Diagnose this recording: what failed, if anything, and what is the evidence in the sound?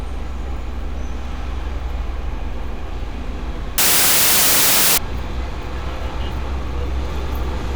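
Sample-format conversion failed from 3.78 to 4.98 s: samples built from the wrong bytes turn the sound into loud, harsh broadband noise, unlike clipping, which keeps the sound's shape.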